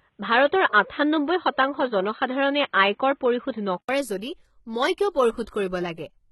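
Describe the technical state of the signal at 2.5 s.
At 2.5 s the input is likely a poorer device, active from the start until 3.89 s. Its narrow band leaves nothing above 4 kHz, so the speech sounds dull and boxy, with its own low noise floor well beneath the signal. An 80 ms silence marks the switch back.

Throughout, including here, the signal is likely HE-AAC compression with heavy damage, which points to a very low bitrate around 16 kbps. Treble up to 11.8 kHz is rebuilt from copied lower bands rather than the original, so s sounds turn gritty, metallic or lispy.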